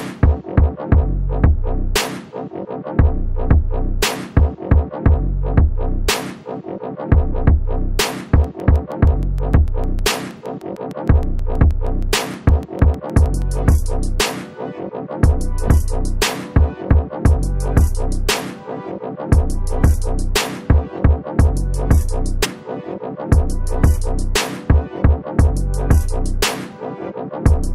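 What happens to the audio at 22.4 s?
At 22.44 s, compressed frames are skipped. Roughly 150 ms of audio never plays, likely several damaged frames. The audio jumps ahead by that much.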